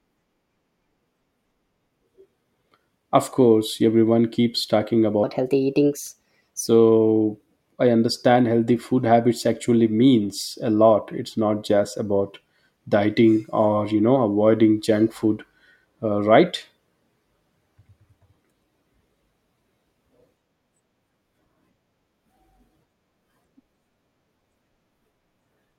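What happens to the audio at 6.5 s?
At 6.5 s the speech is inside a section at the wrong speed, from 5.24 to 6.68 s, running 1.27 times too fast, likely from playback against the wrong clock. Pitch rises about four semitones and tempo hurries together, unlike a pitch shift, which leaves timing intact.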